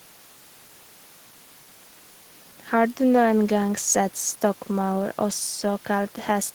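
No technical faults are audible anywhere in this recording.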